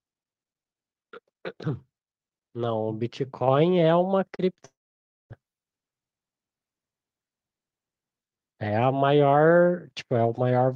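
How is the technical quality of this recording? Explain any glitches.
The recording has four distinct glitches, all clustered between about 3.5 and 5.4 seconds.

At 3.48 s the whole sound, voice and background alike, jumps up by about 5 dB in a single step. This is a microphone volume stepped up: the calling software judged the input too quiet and raised the device's input gain at once rather than gradually, so everything the microphone picked up got louder together from that instant on.

At 4.35 s and again at 4.55 s there are brief smeared, wobbly patches, each lasting about 30 ms. These are short concealed packet losses, each covering a gap of about 40 ms. The audio for those moments never arrived in time, so the receiver extended the preceding sound to bridge the hole, then cross-faded back into the real signal. A short consonant could disappear inside either patch.

From 4.66 s to 5.40 s the speech stops. 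First comes a buzzy or hissy continuation that fades out, then roughly half a second of silence, and after that the speech resumes with material missing. The likely cause is a long network dropout, in which about 640 ms of audio went undelivered. The receiver kept synthesising from the last sound it had received until that faded away, and it played near-silence until packets began arriving again.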